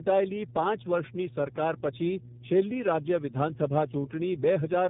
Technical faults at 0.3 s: mains hum; tandem speech coding

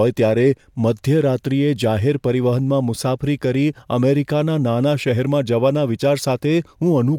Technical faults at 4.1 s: none

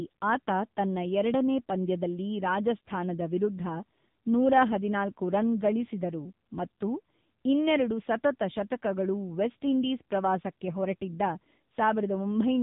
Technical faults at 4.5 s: AMR narrowband mobile codec

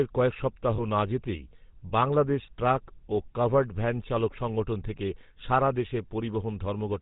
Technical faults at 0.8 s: GSM full-rate codec; lost GSM frames

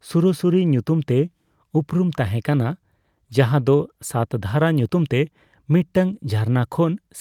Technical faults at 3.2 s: none

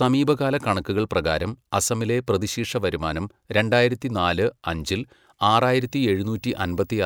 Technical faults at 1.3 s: none

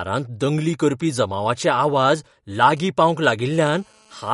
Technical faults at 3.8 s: MP3 compression; GSM phone buzz

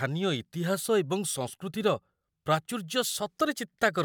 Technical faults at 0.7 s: none

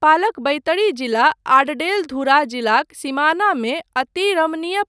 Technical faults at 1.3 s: none

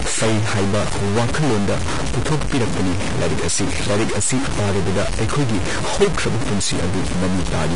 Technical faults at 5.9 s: stuck bit; Vorbis compression

